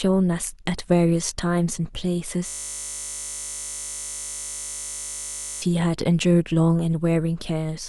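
Speech, interrupted from 2.48 s to 5.62 s by a steady, flat 50 Hz buzz that replaces the voice entirely for just over three seconds. That buzz is a system hang loop: the computer or audio driver stalled, and the sound hardware kept replaying the last 20 ms of its ring buffer instead of receiving new samples. Each pass repeats that identical slice, and with more than 150 back-to-back repetitions the tiny fragment fuses into a continuous tone at the 50 Hz loop rate.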